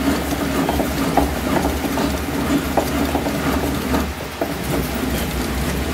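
No technical faults can be heard anywhere in the audio. Nothing in the sound calls for a fix.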